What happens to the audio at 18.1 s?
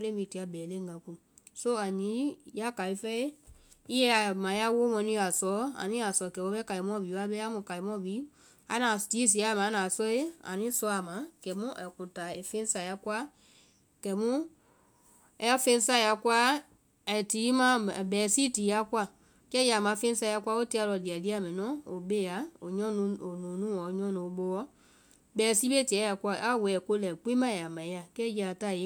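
Nothing goes wrong at 18.1 s: the speech carries on intact through that moment, with no dropout, click or other fault.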